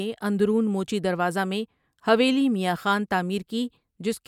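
Across the speech recording there is no audible technical fault at any point, with the signal holding steady and continuous throughout.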